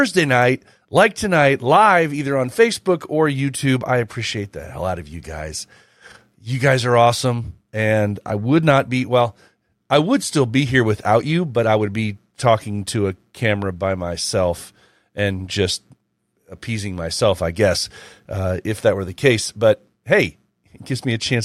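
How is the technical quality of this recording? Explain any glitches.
Nothing in the recording stood out as a technical problem on listening.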